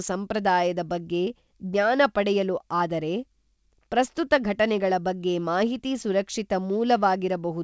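Speech recording with no technical faults to report.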